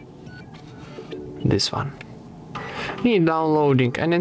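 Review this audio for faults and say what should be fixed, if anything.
Throughout the clip there is a gain swing of around 10 dB that leaves everything squashed. This is gain pumping, likely from input gain set far too high with a fast limiter repeatedly pulling it back. The band ending at 8 kHz comes from the call path. Lower the microphone gain so the limiter rarely engages.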